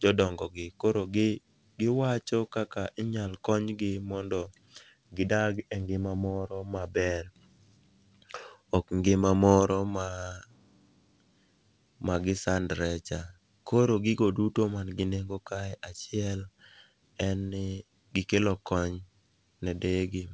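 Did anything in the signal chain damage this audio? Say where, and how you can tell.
No, nothing damaged this audio.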